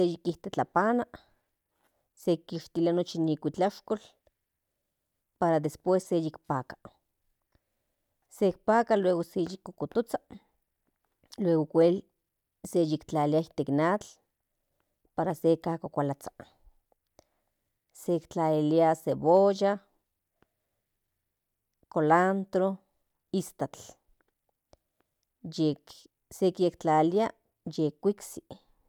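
Speech recording with no audible technical faults.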